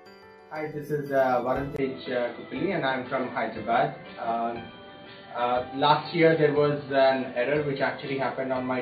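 At 1.76 s there's a brief 20 ms dropout, then everything above 4.5 kHz vanishes and a new noise floor sits roughly 30 dB down, with level unchanged. That's likely the input switched to a poorer device, leaving the rest dull and boxy.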